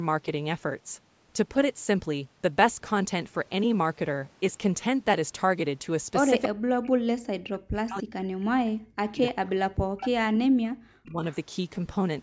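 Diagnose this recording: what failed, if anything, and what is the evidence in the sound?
Echo leak at the call-processing stage: short delayed copies of the speech appear at 6.43–6.48 s and 9.97–10.09 s, trailing the original by 301 ms at about 10 dB below it. The likely cause is a loudspeaker on the far end whose echo canceller let part of its microphone pickup return down the line. On a spectrogram these are faint repeats of earlier harmonic patterns, shifted 301 ms later. In the waveform they are small bursts riding just ahead of the gaps.

Speech suppressed in double talk, also at the call-processing stage: the speech drops away at 6.48–8.24 s, 8.6–9.21 s, 9.37–9.69 s and 10.09–11.24 s, with the deepest cuts around 40 dB. This points to the echo canceller likely mistaking simultaneous talk for echo and turning everything down. The waveform shows the envelope collapsing in chunks. The spectrogram shows the band, which stops at 8 kHz throughout, going dark in patches.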